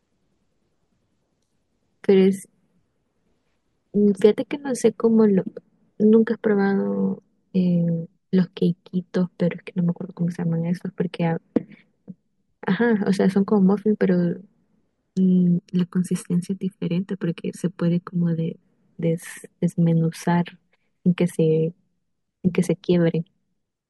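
From 15.59 to 18.62 s, channel delay (comb filtering) appears: one channel lags by roughly 0.7 ms, so the mono sum notches from about 700 Hz upward, sounding hollow and phasey.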